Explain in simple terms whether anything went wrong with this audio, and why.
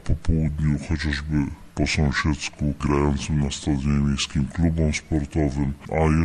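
A wrong sample rate runs through the whole clip, from start to finish. Everything plays at two-thirds speed and about seven semitones lower, sounding slow and deep. That fits audio recorded at 48 kHz being played back at 32 kHz without any conversion.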